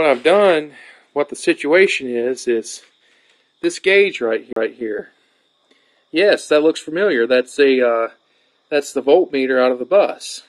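At 4.53 s there is a CD skip. The laser lost its track and landed on a different turn of the disc's spiral. Playback drops out for a moment, roughly 40 ms, ending by 4.56 s. The break is brief. The sound then resumes from another point in the recording, so it jumps abruptly rather than running on smoothly. The join feels like a splice.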